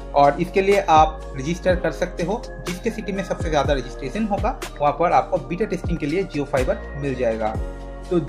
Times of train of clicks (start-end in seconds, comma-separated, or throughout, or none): none